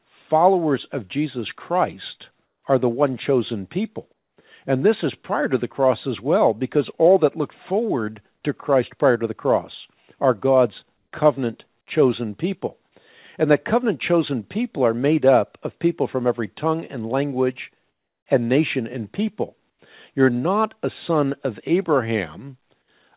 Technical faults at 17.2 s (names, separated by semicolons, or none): none